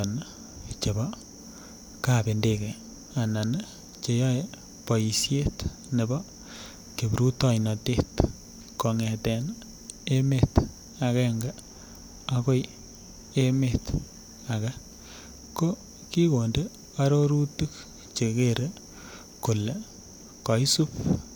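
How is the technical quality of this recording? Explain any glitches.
The recording carries USB whine for its full length, sitting under the speech as a steady, fixed-pitch tone. It is built on 1 kHz, the rate of the USB bus's 1 ms frames, with its strongest component at the 16th harmonic, 16 kHz. The bus's periodic current draw is leaking into the audio through the power or ground path. The whine sits roughly 35 dB below the speech.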